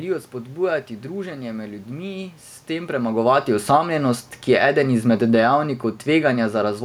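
From 2.9 to 5.55 s, automatic gain falling lowers everything by about 7 dB. Speech and room noise sink together, the waveform tapers, and the spectrogram dims uniformly.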